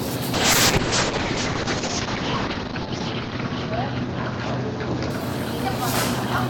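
At 0.34 s a call bitrate drop kicks in and lasts until 5.66 s. The encoder gets starved, which points to a fall from around 96 kbps to about 7 kbps. Everything above 8 kHz disappears, and for roughly 2.25 s at the worst the sound turns rough, watery and muffled.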